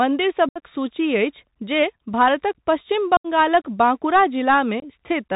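From the first moment the speech carries the Bluetooth CVSD headset codec: its one-bit delta modulation at 64 kHz, with a constantly adapting step, removes everything above 4 kHz. On a spectrogram the energy stops at a flat ceiling there. Loud, bright moments overshoot the step and distort, sibilants sound scratchy, and a fine granular hiss fills the floor, visible as a speckled haze between syllables.

Unconcealed Bluetooth headset packet loss cuts the speech at 0.49 s, lasting about 68 ms, which fits roughly ten lost packets. It happens again at 3.17 s for about 75 ms, also around ten packets, and at 4.80 s for about 23 ms, a few packets. Nothing filled these gaps, so the waveform drops abruptly to flat or idle samples with sharp edges. The spectrogram shows narrow vertical blanks, and the speech returns briefly quieter as the CVSD step rebuilds.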